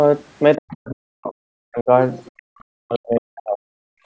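A short speech recording with two echo-related faults. The talker's speech drops away three times, from 0.58 to 1.35 s, from 1.67 to 1.9 s, and from 2.71 to 3.83 s. At its deepest, each drop falls by around 40 dB, close to silence, and the last one lasts about a second. This sounds like speech suppressed in double talk. The likely cause is an echo canceller that heard both sides at once and turned everything down. Between 2.26 and 2.42 s a faint second voice slips in, roughly 35 dB below the talker. That is the other side's voice leaking through. Some of the far end's loudspeaker sound was likely left in the microphone signal.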